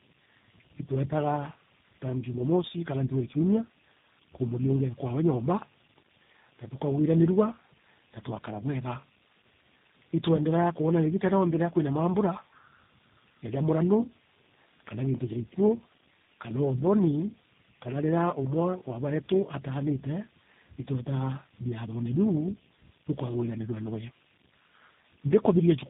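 Speech runs the whole clip with tandem speech coding: it was decoded and re-encoded at each network border, passing through three speech codecs in a row, with the final stage pointing to G.729A at 8 kbit/s. Each coder works on what the last one already damaged, so the voice is rougher, more muffled and more warbly than any single coder would make it. Nothing is left above 3.8 kHz.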